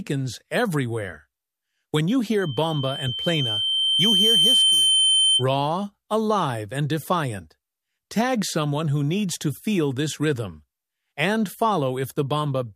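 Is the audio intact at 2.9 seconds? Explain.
No. At 2.9 seconds a loudspeaker feedback squeal is sounding: a single piercing tone near 3.1 kHz that appears at 2.41 s, swells over roughly two seconds until it stands around 5 dB above the rest of the audio, and continues until 5.44 s. The microphone is hearing the loudspeaker it drives, and at that one frequency the loop returns more than it receives, so the tone keeps feeding itself and growing.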